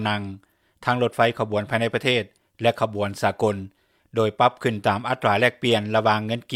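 The signal shows no audible technical fault at any point in the recording.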